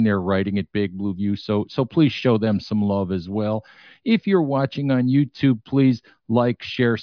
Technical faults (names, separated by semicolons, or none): none